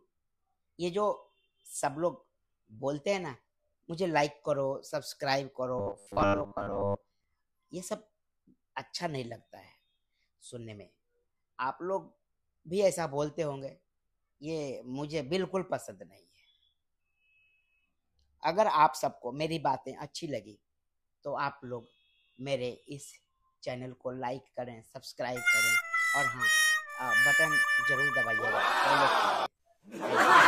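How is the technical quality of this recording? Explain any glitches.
The recording has one clear glitch. From 5.79 to 7.24 s the sound turns into a rigid, metallic buzz pitched at 100 Hz, loosely tracking the underlying audio but without its natural movement. This is robotic sound from repeated short buffers. Audio likely stopped arriving on time, so playback kept looping a 10 ms fragment, for most of that stretch, in place of the missing material. Each loop restarts every 10 ms, and that steady repetition is what stamps the 100 Hz tone onto the sound.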